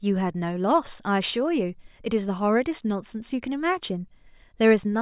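No technical faults can be heard in this speech recording. There is nothing to mark at any point in it.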